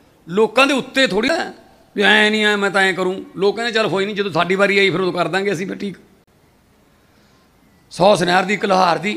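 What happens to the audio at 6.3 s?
A CD skip occurs from 6.24 to 6.27 s. The laser jumps to another turn of the disc's spiral, so the player briefly drops out, for about 30 ms, heard as a tick or short gap. Playback then resumes from a different point in the recording.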